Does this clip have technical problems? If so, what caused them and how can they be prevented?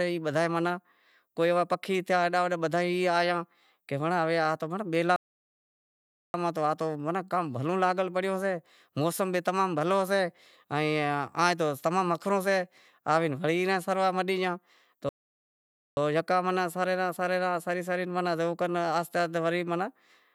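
Yes, the speech has two playback stalls, where the sound cuts off mid-flow and goes silent, from 5.16 to 6.34 s (about 1.18 s) before "ماہ تو کام بھلو", and from 15.09 to 15.97 s (about 0.88 s) before "یکا سرے". The likely cause is the player running out of buffered data or its thread being blocked. Unlike a natural pause, the cut-off doesn't fall at a phrase boundary. Giving the player a larger buffer and a thread that nothing else can block would prevent it.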